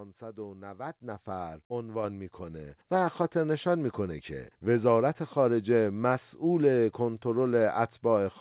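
At 1.02 s and again at 2.04 s the microphone volume is stepped up, first by about 7 dB and then by about 4 dB. Each time the call software has judged the input too quiet and raised the device gain in a single jump. Voice and background noise rise together and instantly, which sets this apart from a talker leaning closer, where only the voice would grow, and from smooth gain riding. All of it sits within the call path's band, which stops at 4 kHz.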